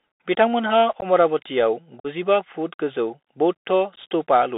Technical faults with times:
0.00-4.58 Bluetooth CVSD headset codec
1.00-1.05 unconcealed Bluetooth headset packet loss
2.00-2.06 unconcealed Bluetooth headset packet loss
3.96-3.99 unconcealed Bluetooth headset packet loss

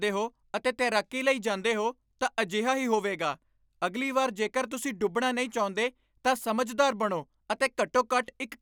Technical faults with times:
none

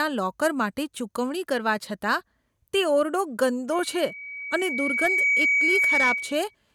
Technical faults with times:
3.72-6.55 loudspeaker feedback squeal

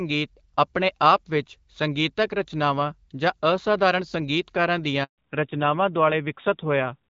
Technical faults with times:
5.04-5.18 handover gap
5.18-7.09 fallback to narrowband

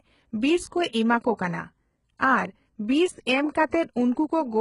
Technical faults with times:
0.00-4.61 HE-AAC compression

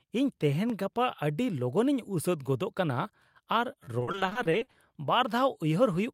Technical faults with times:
0.70 repeated buffer
3.84-3.88 repeated buffer
3.99-4.75 repeated packet loss (robotic sound)

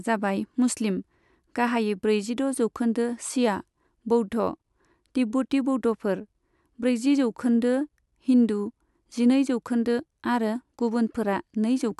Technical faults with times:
none

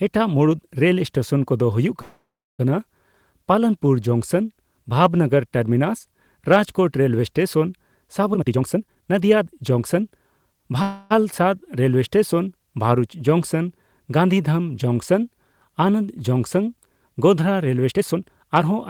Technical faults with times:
2.01-2.61 call audio freeze
8.32-10.12 jitter buffer speed-up
10.82-11.12 call audio freeze
12.81 electrical switching spike
17.88-18.72 jitter buffer speed-up

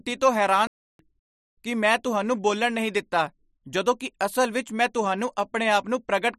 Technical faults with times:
0.67-0.99 playback stall

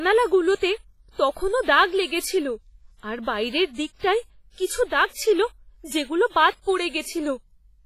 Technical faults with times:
0.00-7.85 WMA compression

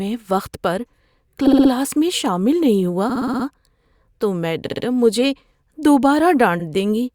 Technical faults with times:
1.46-1.70 repeated frames
3.09-3.45 repeated frames
4.66-4.84 repeated frames
6.59-6.65 repeated frames

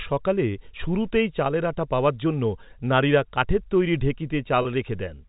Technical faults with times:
4.62-4.65 packet loss with pitch repetition

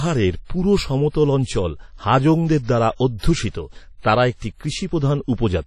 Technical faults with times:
0.00-5.67 WMA compression

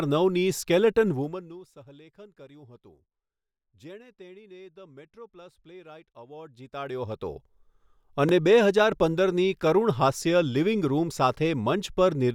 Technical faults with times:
1.10-1.63 zipper noise
8.29-8.31 overlapping chunks

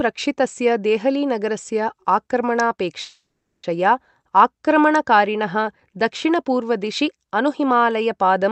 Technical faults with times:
3.01-3.66 call audio freeze
5.01-6.05 channel delay (comb filtering)

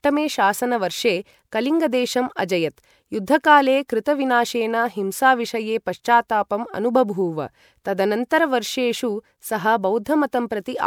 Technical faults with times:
0.00-10.86 generation loss

